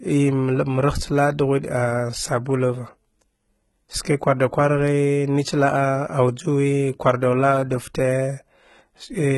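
Across the whole clip, the treble sounds synthetic. S sounds turn gritty and metallic. Nothing is present above 11.8 kHz. The cause is likely heavy HE-AAC compression, which fits a rate near 16 kbps. It rebuilds the upper band from copied lower harmonics that no longer line up.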